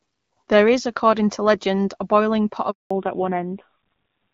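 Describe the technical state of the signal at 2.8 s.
At 2.8 s the speech is inside a handover gap, running from 2.71 to 2.91 s, right after "legend a boiling pot". While the call was switched between networks no speech frames reached the decoder, so the voice fades out within a few tens of milliseconds and then stays fully silent for about 200 ms. Packet-loss concealment would fill short holes with smeared or repeated sound, but this gap is a single clean stretch of silence.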